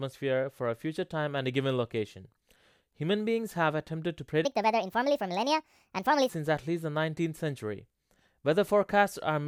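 From 4.45 to 6.29 s a wrong sample rate runs the speech 1.5 times too fast, raising pitch about 7 semitones, which fits 32 kHz audio played at 48 kHz. It sounds high and hurried; a spectrogram shows harmonics and formants stretched upward, syllables squeezed shorter.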